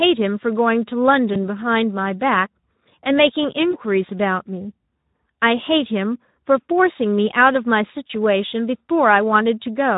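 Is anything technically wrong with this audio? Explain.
Yes. Two faults are audible in this speech clip.

Speex codec: Throughout, the speech has the plainly audible damage of the Speex codec at a low setting, consistent with a bitrate of about 11 kbps. The CELP coder has too few bits to model the excitation, so the voice sounds noisy and hoarse, with a grainy, slightly synthetic texture. Fine detail in the speech is replaced by an approximation that the coder can afford at that rate.

VoIP packet loss concealed by the speech codec: There are short disturbances at 1.33–1.38 s, 3.71–3.77 s and 8.07–8.10 s. Each fits a single lost 20 ms packet. The decoder filled each gap by extending its last pitch and filter with falling gain, which produces a brief buzzy or smeared blip. Because each decoded frame depends on the previous one, the speech stays weak or distorted for a few tens of milliseconds after the missing audio.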